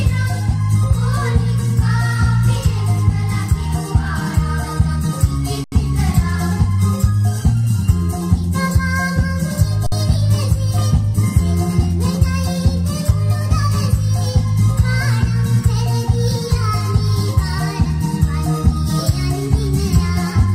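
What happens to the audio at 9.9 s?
The output buffer ran dry from 9.87 to 9.92 s, an underrun with held sample lasting about 55 ms. With no new data arriving, the converter froze on its last value, so the waveform sits flat and the sound simply stops without a sharp click. Because essentially nothing was lost during the stall, playback picks up where it left off, and the sound returns with only a soft edge rather than a jump.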